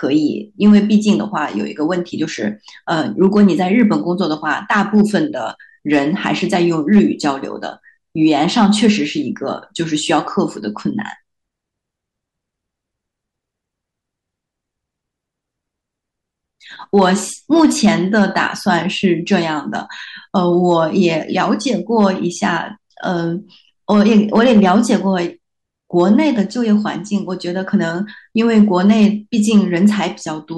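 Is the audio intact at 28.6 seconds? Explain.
No, there's hard clipping running through the whole clip: it's driven about 4 dB past full scale, so peaks get sliced flat, giving a crackly edge on loud syllables.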